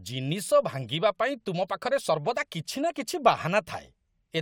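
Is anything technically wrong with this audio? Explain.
No, nothing technically wrong turns up anywhere in this speech recording.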